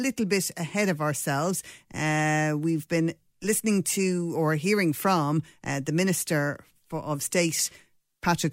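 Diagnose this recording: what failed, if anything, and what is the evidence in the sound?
Nothing in this speech recording stood out on listening as a fault at any stage between capture and playback.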